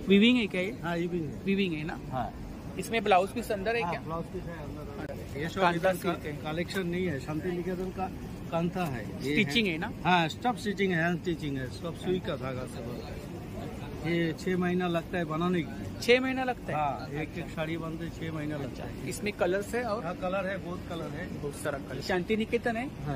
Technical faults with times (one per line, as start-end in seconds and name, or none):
5.06-5.09 CD skip
19.90-23.15 adaptive stream at a lower bitrate